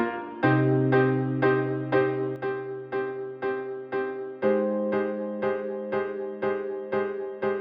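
A sudden gain jump at 2.36 s drops the music and its background by about 6 dB at once, likely from a gain change applied without a ramp.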